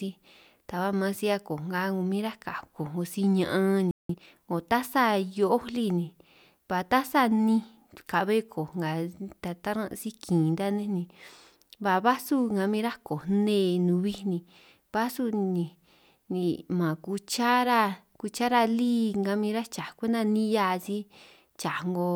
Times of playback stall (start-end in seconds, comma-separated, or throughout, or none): 3.91-4.09